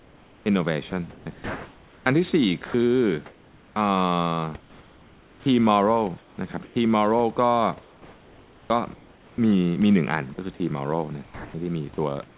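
From 0.00 to 3.76 s and again from 4.60 to 6.76 s, the sound is chopped by the voice detector, likely because it kept switching transmission on and off. Roughly 1.9 s and then 1.2 s of speech are replaced by comfort noise, so syllables break off and the background flickers between real room noise, sitting about 29 dB below the speech, and a flat synthetic hiss.

From 7.82 to 9.38 s, comfort noise takes the place of the background, likely because the sender stopped transmitting during a pause. About 1.3 s of the real background becomes a steady, featureless noise that lacks the detail of the room.

Inside that stretch, at 8.68 s, the onset is clipped by the voice detector, likely because it reacted late when speech resumed. About 20 ms of the start is missing, so the sound begins abruptly, without its soft lead-in.

At 10.34 to 10.38 s, sound is dropped by the voice detector, likely because it mistook the sound for background. 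About 30 ms of audio is lost to a 40 ms patch of comfort noise, which leaves a brief hollow gap.

From 11.24 s to the end, the sound is again chopped by the voice detector, likely for the same reason. About 0.44 s is swapped for comfort noise, so the closing speech stutters against synthetic noise. Throughout, the G.711 call path keeps everything below 4 kHz.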